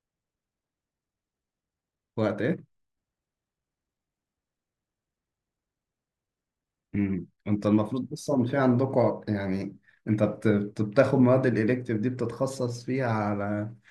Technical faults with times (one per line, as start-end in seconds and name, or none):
0.00-13.91 block size mismatch (truncated)